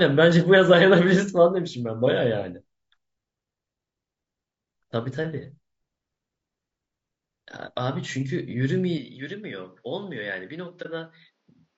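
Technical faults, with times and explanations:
Throughout: low-delay AAC compression, likely AAC-ELD at 32 kbps; short frames resolve voice harmonics poorly, leaving speech plainly rough and grainy with noise between harmonics.
8.98 to 11.78 s: input switched to a poorer device, likely; the new path cuts everything above 6.9 kHz, drops level about 10 dB, sounding duller, with no gap.
10.82 s: AAC frame loss with muting; one frame was zeroed by the decoder, so overlapping windows fade the sound out and back over about 40 ms, leaving a brief dip.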